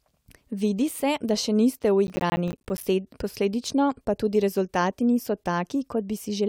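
A speech clip in which the processor falls behind for a stretch from 2.07 to 2.83 s, just after "se da še niste", producing processor overload crackle. Around twenty short buffers of roughly 10 ms each miss their deadlines, and each miss drops to silence with hard edges. Strung together, those tiny dropouts form a gritty, tearing crackle laid over the speech for about three quarters of a second, which clears once the load eases.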